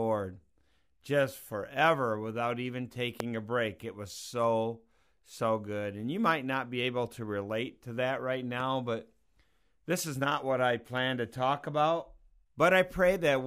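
At 3.20 to 3.23 s, between "just forever without even" and "a break", a single loud pop lands well above the speech, peaking roughly 20 dB over it. A second, smaller pop follows at 8.60 to 8.63 s, just after "relate to that right", only about 5 dB above the signal. The likely cause is a brief voltage step, from a plug, switch, static discharge or driver glitch, added to the signal while the speech continues underneath.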